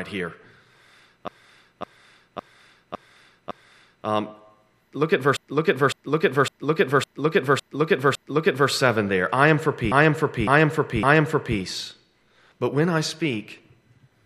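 At 1.28 s the speech hits repeated frames. The same 0.56 s block plays five extra times until 4.07 s. This adds 2.79 s. After "look at", a second run spans 5.37 to 8.71 s. There are six extra plays, adding 3.34 s. After "there I am for", a third runs from 9.92 to 11.59 s. There are three extra plays, adding 1.67 s. Each is heard as a looping stutter. The block length fits a short run of compressed frames resent or rewritten.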